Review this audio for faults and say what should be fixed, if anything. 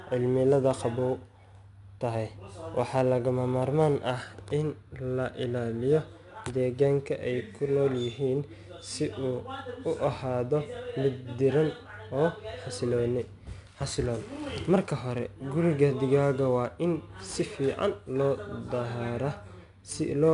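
A gritty hiss rides on the speech for the whole clip, swelling on louder syllables, roughening sharp consonant onsets, and nothing is heard above 10.6 kHz, which dulls the top end. This is 4-bit ADPCM compression, plainly audible. Each sample is coded as a coarse 4-bit step away from a predicted value, so the error grows with the signal, and the adaptive step lags on sudden attacks. The bandwidth fits a rate around 89 kbps. To prevent it, keep the speech in a higher-resolution format such as 16-bit PCM or a modern perceptual codec at an adequate bitrate.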